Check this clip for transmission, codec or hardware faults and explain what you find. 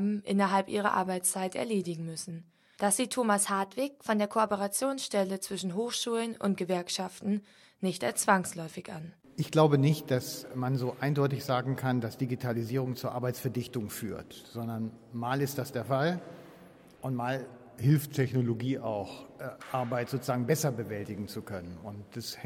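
Two drift correction steps occur. From 3.43 to 4.46 s, sound speeds up 6.2% and rises 103 cents. From 17.47 to 18.53 s, it slows 6.2% and drops 110 cents. The likely cause is clock-matching software jumping its playback rate to manage a buffer.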